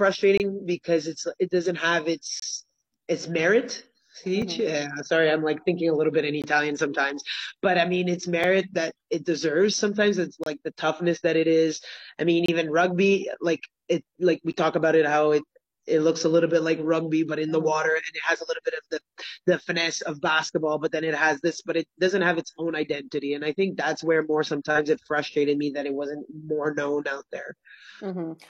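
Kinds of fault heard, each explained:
Gap between stream segments: segment timestamps leave small holes the player fills with silence, giving hard-edged dropouts of 3 to 28 ms roughly every 2 seconds.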